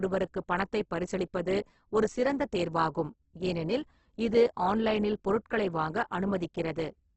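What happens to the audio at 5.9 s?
At 5.9 s the speech still carries the heavy Opus compression heard throughout, likely from a very low-bitrate music-mode encode near 12 kbps. Starved bands are noise-filled, so tones sound grainy and rough. A spectrogram shows speckled fill beneath a hard ceiling at 8.1 kHz.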